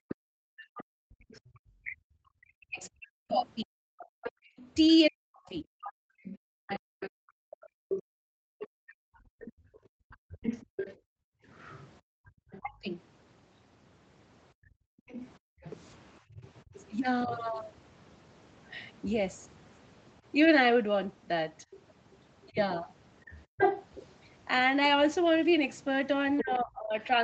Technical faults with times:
0.00-7.69 speech suppressed in double talk
0.09-26.43 other side's voice leaking through
4.06-16.40 background gated by the echo canceller
12.60-17.31 speech suppressed in double talk
22.50-22.57 speech suppressed in double talk
23.46-23.58 background gated by the echo canceller
26.41-27.24 speech suppressed in double talk

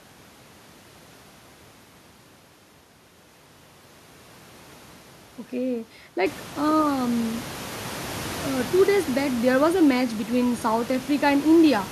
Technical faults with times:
none

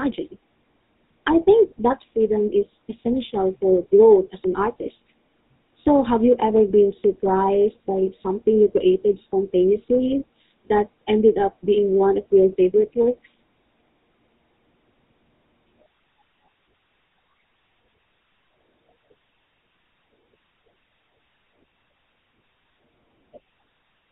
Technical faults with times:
0.00-24.11 GSM full-rate codec

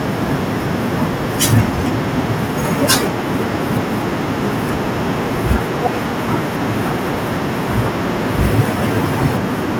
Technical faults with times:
none

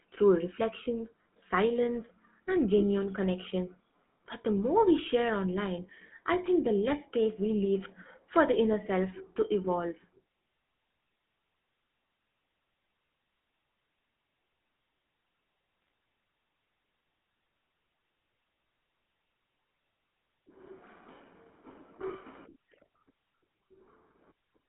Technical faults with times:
0.00-24.68 GSM full-rate codec
2.79-2.83 GSM bit errors
9.38-9.42 GSM bit errors
15.82-15.87 GSM bit errors

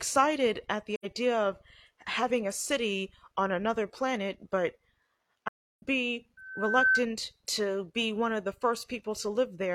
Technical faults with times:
0.95-1.05 AAC frame loss with muting
5.48-5.82 AAC frame loss with muting
6.37-7.06 loudspeaker feedback squeal

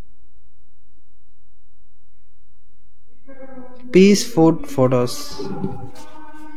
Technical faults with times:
0.00-6.57 DC offset

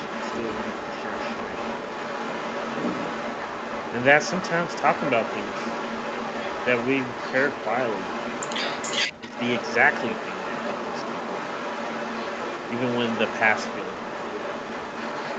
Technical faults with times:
0.00-15.38 echo leak
9.18-9.37 speech suppressed in double talk

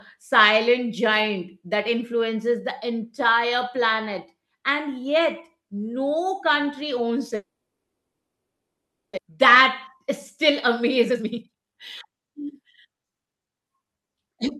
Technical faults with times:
7.35-9.19 long network dropout
9.27-10.05 jitter buffer speed-up
10.49-13.34 jitter buffer speed-up

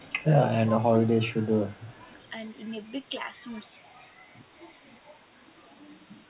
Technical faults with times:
0.00-0.31 speech suppressed in double talk
0.68-2.16 speech suppressed in double talk
1.72-2.30 echo leak

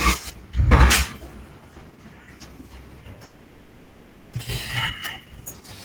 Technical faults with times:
3.23-4.37 long network dropout
5.19-5.69 jitter buffer speed-up

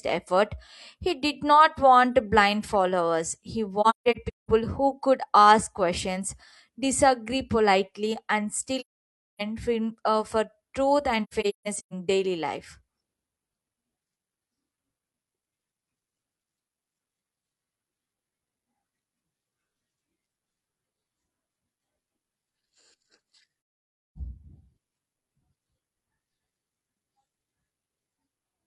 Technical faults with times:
3.81-4.51 AAC frame loss with muting
8.80-9.42 AAC frame loss with muting
11.23-11.94 AAC frame loss with muting
23.84-24.18 AAC frame loss with muting

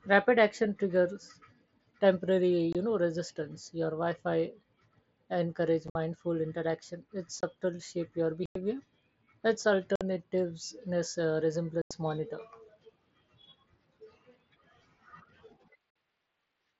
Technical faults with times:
2.73-2.75 unconcealed Bluetooth headset packet loss
5.88-5.95 unconcealed Bluetooth headset packet loss
7.41-7.43 unconcealed Bluetooth headset packet loss
8.46-8.56 unconcealed Bluetooth headset packet loss
9.96-10.01 unconcealed Bluetooth headset packet loss
11.82-11.91 unconcealed Bluetooth headset packet loss
15.90-15.96 unconcealed Bluetooth headset packet loss

